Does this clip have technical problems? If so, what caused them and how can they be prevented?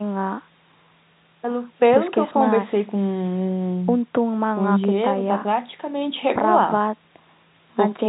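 No, nothing in this speech needs fixing: it carries the normal G.711 telephone coding, with the band stopping at 4 kHz as that format always does, so there is nothing to prevent.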